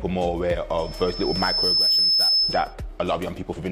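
From 0.78 to 2.74 s, loudspeaker feedback squeal rises at 5.2 kHz. The microphone hears its own loudspeaker. The tone builds over about a second, ending somewhat louder than the sound.

At 3.53 to 3.59 s, damaged data in the compressed stream gives a short glitch. The decoder misreads corrupt frames and loses sync.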